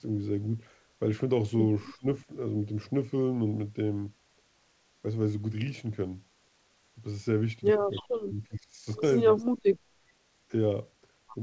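Around 1.98 to 2.06 s the speech briefly dips hard, and again from 8.02 to 8.86 s, where it drops over most of that stretch, by as much as roughly 30 dB at its deepest. That's likely speech suppressed in double talk: the canceller couldn't separate the talker from the far side and ducked both. Then at 9.38 to 9.45 s a very faint delayed copy of the voice, about 362 ms late, slips through. It's likely an echo leak from a loudspeaker end. All of this comes through band-limited audio with nothing above 8 kHz, which fits a G.722 call path.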